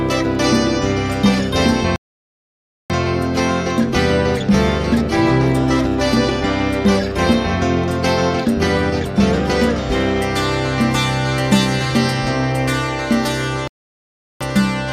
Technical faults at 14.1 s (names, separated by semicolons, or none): playback stall